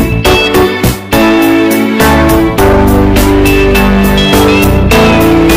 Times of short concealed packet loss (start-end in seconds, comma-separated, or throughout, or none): none